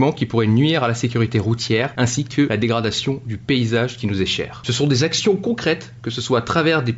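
Nothing is technically wrong with this audio.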